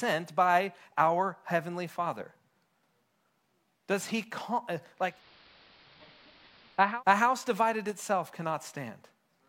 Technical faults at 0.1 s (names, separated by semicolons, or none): none